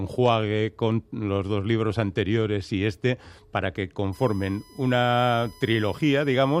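The audio picks up USB whine from 4.13 s through to the end: a fixed-pitch tone at 1 kHz, loudest at its 5 kHz harmonic, sitting roughly 30 dB below the programme. The 1 kHz spacing matches the bus's 1 ms frame rate, with current pulses leaking in through shared power or ground. A spectrogram would show evenly spaced horizontal lines at 1 kHz multiples starting abruptly at 4.13 s, with the 5 kHz line brightest.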